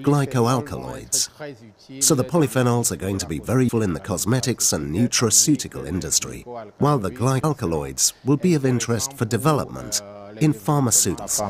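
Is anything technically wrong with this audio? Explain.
Yes. The audio has abrupt skips at 3.69 s, 7.44 s and 11.19 s, evenly spaced about 3.75 s apart. At each point roughly 300 ms of sound is missing, and the material on either side is butted together with no gap. This pattern fits audio missing between chunks, likely from a recorder or processor working in 4-second blocks. It drops a short stretch each time it closes one block and opens the next, producing a regular, sudden jump forward in the sound.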